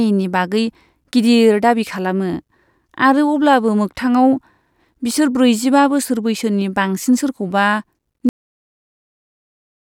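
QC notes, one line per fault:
8.29 s, cut-off end: the speech stops mid-sound and falls straight to digital silence with no decay, because the final buffers were never written or played.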